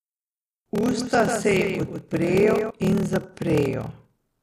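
From the start, a block size mismatch with padding puts a steady 38.3 Hz buzz under the speech and slows it to 0.889 times normal speed at about its usual pitch. This fits 1024-sample blocks being zero-filled to a larger read size. The waveform shows regularly spaced flat gaps, and the spectrogram shows thin vertical stripes at that rate.

From 0.86 s to 2.7 s, a doubled audio track adds a full-band copy of the speech roughly 150 ms behind and about 5 dB quieter, likely from a second, slower capture path. It sounds like a dry slapback with no room colour. On the spectrogram, each syllable's pattern repeats shifted right, and the copy appears and disappears abruptly at both ends.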